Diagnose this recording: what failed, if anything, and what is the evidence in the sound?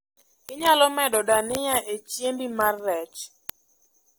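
Word clock ticks run through the speech from 0.14 s to 4.03 s: about twenty sharp clicks at a steady rate of roughly one every 0.2 s, some louder than others. The failure is at the digital interface feeding the converter. The receiving device is running on its own clock rather than locking to the sender's, and the two drift apart by something like 150 parts per million. Each time they slip by a sample, a single sample is dropped or repeated and the waveform steps, producing one tick.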